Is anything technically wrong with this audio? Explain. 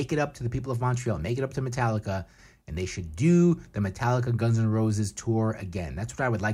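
No, nothing technically wrong stands out here; this bit of speech comes across just as it should.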